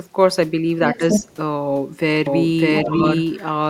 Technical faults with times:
0.89-1.36 other side's voice leaking through
0.98-1.27 speech suppressed in double talk
2.26-3.69 doubled audio track
2.76-2.81 other side's voice leaking through
2.84-3.01 speech suppressed in double talk

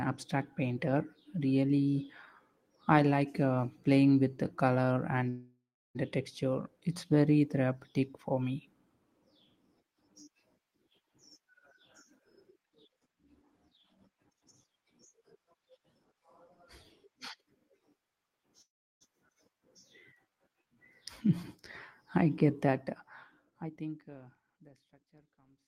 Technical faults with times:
5.29-5.97 call audio freeze
11.38-16.14 jitter buffer speed-up
18.62-19.03 call audio freeze
19.29-19.31 skip ahead
19.53-21.38 jitter buffer slow-down
22.68-25.20 jitter buffer speed-up

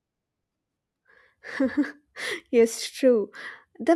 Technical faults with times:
none

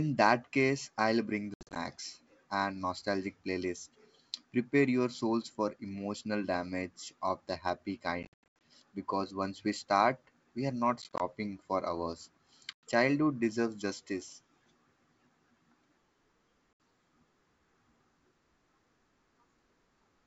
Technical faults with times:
1.54-1.77 packet loss on an ADPCM call
8.23-8.61 packet loss on an ADPCM call
11.02-11.21 packet loss on an ADPCM call
12.73-12.83 packet loss on an ADPCM call
16.73-16.80 packet loss on an ADPCM call

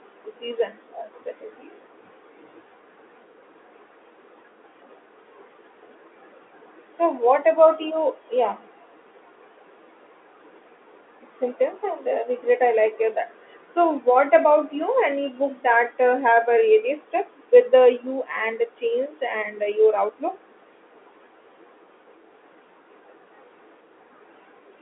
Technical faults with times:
none

